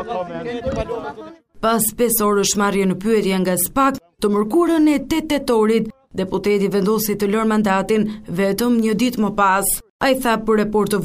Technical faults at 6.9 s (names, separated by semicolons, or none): none